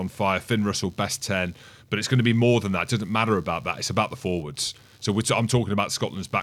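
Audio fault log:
Throughout, computer activity noise: a buzzy, chirping layer sits under the speech, pulsing at around 70 times a second and roughly 35 dB below the voice. It tracks the computer's workload rather than the talking. Shifting load on the processor, graphics hardware or mouse draws changing current through a ground shared with the audio input, so those fluctuations ride into the signal as an audible rasp.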